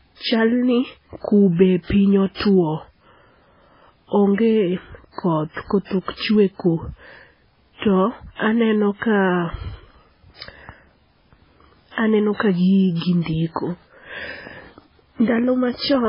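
From start to finish the speech has no content above 5.3 kHz and carries a heavy watery, swirling texture, with s sounds turning metallic. This is likely MP3 compression at a starved bitrate, which fits around 16 kbps. Unlike a plain low-pass filter, weak frequency lines flicker on and off between frames.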